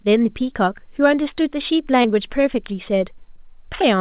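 Short concealed packet loss at 2.02 to 2.06 s and 3.36 to 3.39 s: about 20 ms of audio arrived too late, and the receiver extended the preceding sound, heard as a brief smear or wobble in the narrowband telephone-quality audio.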